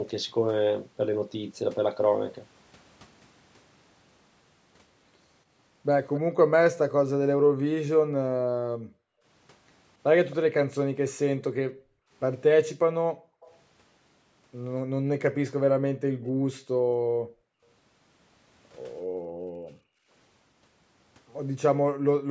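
At 6.14 to 6.20 s a faint repeat of the speech trails it by 264 ms, about 15 dB down. This is an echo leak, most likely a loudspeaker on the far end whose echo canceller let some of the returned sound through. On a spectrogram it shows as a weaker copy of the speech harmonics shifted later in time.

From 6.21 to 13.41 s the background is gated by the echo canceller, which pulls the microphone down hard, by up to about 40 dB and for roughly three seconds in total. The room tone drops out and returns. On the waveform the noise floor collapses to near flat, and on a spectrogram the band up to 8 kHz goes dark.

Within that span, from 10.30 to 11.43 s, the echo leak returns at the same 264 ms delay, about 20 dB below the speech. At 13.41 to 13.56 s a last faint trace, about 30 dB down, appears as the gating releases.

Gating of the background comes back from 15.01 to 20.12 s, again with drops of up to about 40 dB totalling roughly three seconds. 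It returns once more from 21.74 s to the end of the clip for about half a second, showing the same sudden holes in the noise floor.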